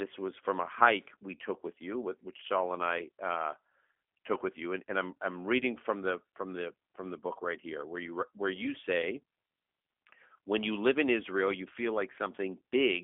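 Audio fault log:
Throughout: G.729 codec, speech rebuilt from filter, pitch predictor and sparse pulses, sounding rough and synthetic; spectrogram shows a 250 Hz to 3.5 kHz band, empty above 3.6 kHz.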